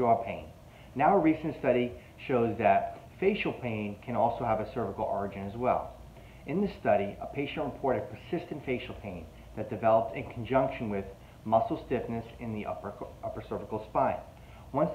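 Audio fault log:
No audible faults anywhere in this clip.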